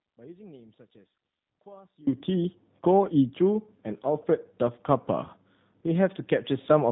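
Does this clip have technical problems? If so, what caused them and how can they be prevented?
Yes. An audio dropout to a faint residue runs from the start until 2.07 s: the wanted speech is already missing when the clip begins, leaving only a faint trace roughly 30 dB below normal level, then it returns abruptly. The likely cause is a broken feed ahead of a path that stayed live. Securing connections and monitoring the input before recording would prevent it.

The G.729 codec affects the whole clip. Nothing above 3.8 kHz survives, and the speech sounds rough and synthetic because it is rebuilt from a vocal tract filter, a pitch predictor and a few pulses per frame, which fits an 8 kbit/s VoIP link. A wideband codec or a direct recording would avoid it.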